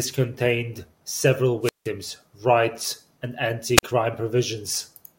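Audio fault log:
1.62–1.89 s and 3.75–3.83 s, wireless microphone squelch dropout: after "contained several" a brief swell of hiss gives way to a hole of near silence, about 170 ms long, before the speech returns on "rights and". Later, just after "rights and", a shorter hiss and a gap of about 44 ms follow. The transmitter's radio signal is fading, so the receiver's squelch mutes the output until reception recovers.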